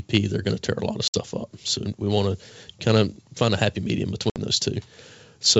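At 1.08 s, after "tear a lot of", and at 4.30 s, after "find a happy medium", packet loss on an ADPCM call cuts 60 ms to flat silence. Each shows as a sharp-edged blank gap in the waveform and spectrogram. The decoder's predictor then resumes out of step, so the sound returns slightly distorted.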